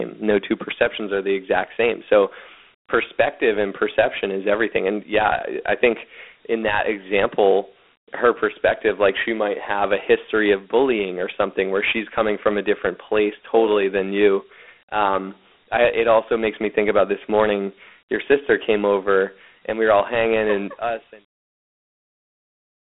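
Throughout the speech, Dialogic VOX ADPCM coding is plainly audible. The band runs from about 250 Hz to 3.5 kHz, with nothing above 3.8 kHz. Each sample is stored as a coarse 4-bit step, so gritty hiss trails the speech. That fits 32 kbps coding. The smooth fade out, from around 20.5 s to 21.3 s, carries the same grit.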